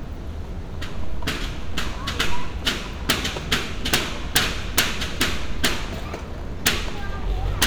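An everyday-sound recording with integer overflow: loud peaks pushed about 1 to 6 dB past the limit wrap to the opposite sign, causing harsh cracks at 3.10, 3.94, 4.36, 4.78, 5.21, 5.65, 6.67 and 7.63 s.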